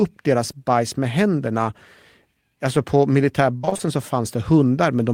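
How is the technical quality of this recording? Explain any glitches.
The recording has one clear glitch, a burst of repeated packet loss (robotic sound) from 3.57 to 3.81 s in the speech. Over that quarter-second, five short gaps open in quick succession, the longest about 58 ms. Each is patched by stretching the last bit of sound, so roughly 136 ms of the span, more than half, is filled-in audio. The result is choppy audio with pieces missing. A single dropout would leave one brief hiccup. Here the dropouts repeat back to back.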